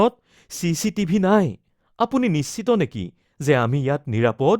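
No audible technical faults.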